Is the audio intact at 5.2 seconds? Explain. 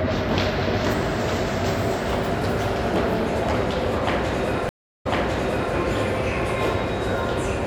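No. At 5.2 seconds the sound is inside a stream reconnect, which runs from 4.69 to 5.74 s. The connection dropped, so the player went silent for 346 ms. It then reconnected and started a new decoder partway through the stream. The server resent a burst of earlier data. As a result, the sound picks up 705 ms before the point where it broke off, and that stretch is heard a second time.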